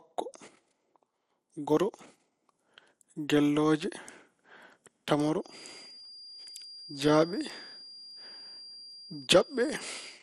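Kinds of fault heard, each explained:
MP2 compression: The speech was likely coded with MPEG Layer II at a low rate, fitting about 64 kbps, which starves its 32 sub-bands of bits. Upper bands drop out, leaving nothing above 14.2 kHz, and coarse quantisation leaves a dull, gurgling graininess throughout.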